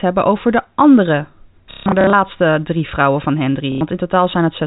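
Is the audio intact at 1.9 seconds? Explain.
No, it's hit by packet loss with last packet repeated from 1.71 to 2.13 s. The last received packet gets replayed in place of lost ones, giving a robotic stutter with runs up to 150 ms.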